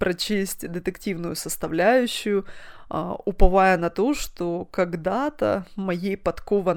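Nothing in this speech recording trips the ear as a technical fault, so there's really nothing to flag here.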